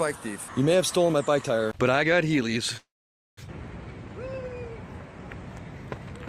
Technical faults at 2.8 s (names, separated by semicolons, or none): call audio freeze